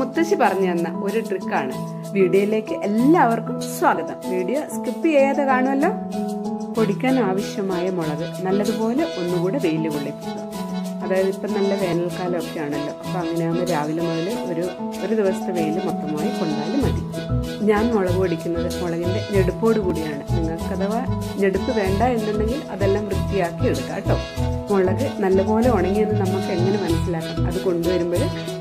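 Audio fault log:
3.97 s, 9.95 s, 15.9 s, 19.9 s: overlap between stream segments. Each is a brief click or tiny skip as a sliver of sound vanishes and the waveform jumps. The missing pieces are about 5, 8, 6 and 14 ms. Every event sits just before a 2-second segment boundary. The time stamps of adjoining segments overlapped, so the player trimmed that span even though the sound there was never duplicated, deleting real audio.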